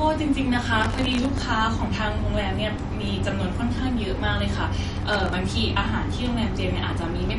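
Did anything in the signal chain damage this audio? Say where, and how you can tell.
Yes. At the codec stage, the speech is band-limited with nothing above 11.2 kHz, and it has a plainly audible watery, swirling texture on the sibilants. That likely comes from MP3 encoding at a low bitrate around 48 kbps. Unlike a simple low-pass filter, the damage shifts from frame to frame.

At the driver or buffer stage, processor overload crackle appears from 0.80 to 1.42 s and from 4.97 to 5.33 s. Buffers of well under a millisecond missed their deadlines about 40 and 15 times in a row, and each miss replayed stale audio with hard edges. Unlike clipping, the grit is confined to these bursts and stops when the load eases.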